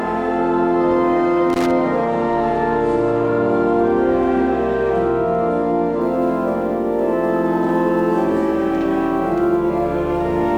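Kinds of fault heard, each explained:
Loose connector crackle: a worn or dirty contact flickering open and shut, chopping the signal and throwing little pops from any DC on the line. Here it's a short, ragged burst of scratchy crackle from about 1.50 to 1.71 s, then it clears.
Sample clock jitter: the converter's clock wobbling, so samples land a touch early or late, and the error grows with how fast the waveform moves. From about 6.0 s to the end there's a fine hiss and roughness riding on the louder, brighter parts, roughly 40 dB under the signal and consistent with timing errors of a few microseconds.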